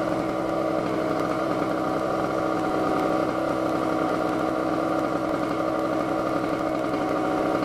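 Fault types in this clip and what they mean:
Periodic USB or driver dropouts: a background task stalls the USB bus or audio driver every 0.1 s, discarding about a millisecond of audio each time and leaving silence, so a steady ten-per-second ticking runs through the sound from 0.09 to 7.59 s.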